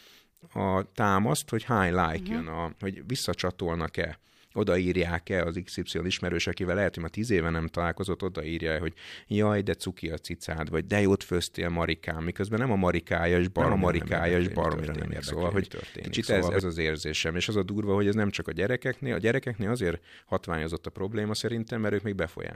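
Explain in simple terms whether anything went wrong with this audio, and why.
A second copy of the speech was likely mixed in out of step, giving a doubled audio track: from 13.6 to 16.6 s, just before "az érzésem és az", an equally loud echo trails about a second behind.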